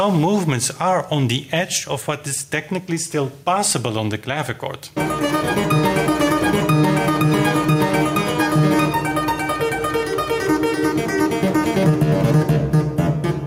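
The input gain is likely set far too high, so a fast limiter clamps down on every loud moment, producing gain pumping throughout. The gain swings around 5 dB, leaving the whole clip squashed and breathing.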